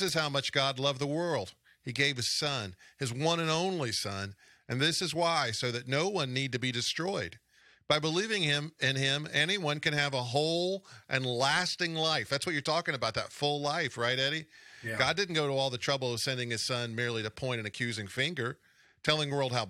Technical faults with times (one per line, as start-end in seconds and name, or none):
none